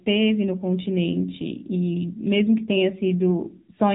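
From start to finish the speech carries the sound of the AMR narrowband mobile codec. Nothing reaches above about 3.8 kHz, so sibilants and consonant edges are dulled and the voice sits in a boxed telephone band. The codec rebuilds the voice from a vocal-tract model excited by sparse pulses, and the plainly audible buzzy, synthetic edge points to a low rate near 7.4 kbps, where too few pulses per frame remain to capture the natural texture.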